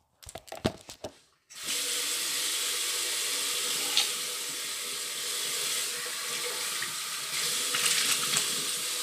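Throughout, a block size mismatch (truncated) discards the tail of each block, adding a steady 100 Hz buzz that fits 10 ms blocks, while the sound keeps its normal speed.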